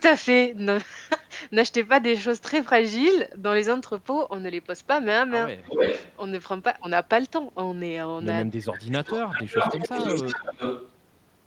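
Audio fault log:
5.66–6.16 s, 9.14–9.78 s and 9.97–10.91 s: echo leak. A delayed copy of the speech returns 295, 305 and 308 ms behind the original, roughly as loud as the speech at first, then a little quieter. This is likely a far-end loudspeaker echo the canceller failed to remove.
8.53–9.13 s, 9.44–9.97 s and 10.21–10.59 s: speech suppressed in double talk. The speech dips sharply, by around 20 to 25 dB, for about half a second, then shorter stretches. The cause is likely the canceller turning everything down while both sides overlap.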